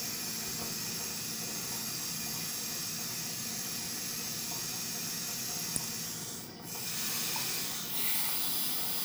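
Two small jumps in the sound occur at 2.24 s and 5.27 s, as if a few milliseconds are missing: roughly 3 ms at the first and around 10 ms at the second. The likely cause is a dropped buffer (overrun), where samples were overwritten before being collected and the surrounding audio was spliced together without a gap.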